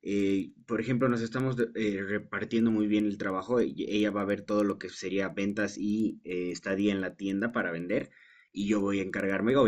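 Throughout, a resampler restarted on every block mishandles block edges, leaving ticks at 10 Hz, seen as evenly spaced vertical lines on a spectrogram.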